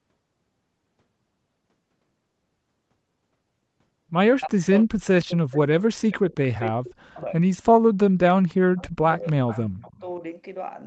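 From 4.45 to 7.47 s, with both sides likely talking at once, the echo canceller turns the voice down: speech suppressed in double talk, dipping by about 40 dB in pieces totalling some two seconds. Inside that stretch, at 4.79–4.83 s and 7.16–7.21 s, echo leak from a likely loudspeaker on the other end sends back brief scraps of voice 308 ms late, about 30 dB and 25 dB below the speech. The suppression returns from 7.94 to 9.35 s, about a second in all, with another leaked scrap at 8.49–8.54 s, about 35 dB down. A longer leaked stretch follows from 9.27 to 10.0 s at about 20 dB below the speech, while the voice drops out again from 9.68 to 10.22 s.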